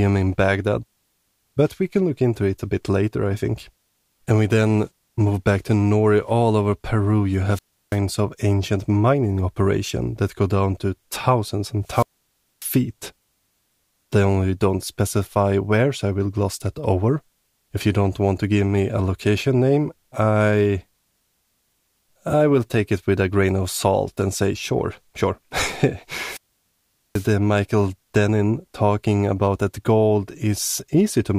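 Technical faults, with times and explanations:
7.52–7.98 s, 11.85–12.78 s and 26.20–27.32 s: wireless microphone squelch dropout, three times, with holes of about 335 ms, 593 ms and 787 ms. Each time the radio link weakens, hiss and static swell over the speech, and then the receiver's squelch gates the output to near silence until the signal recovers. That rising hiss before the mute sets it apart from a digital packet dropout, which cuts out abruptly with no noise build-up.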